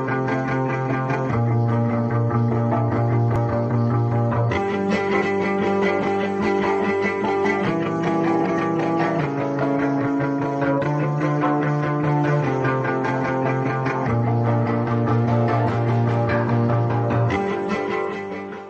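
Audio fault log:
5.20 s, compressed frames skipped: about five 23.2 ms frames never play, so roughly a tenth of a second vanishes and the audio jumps ahead.
8.57 s, compressed frames skipped: about three frames drop out, jumping ahead roughly 70 ms.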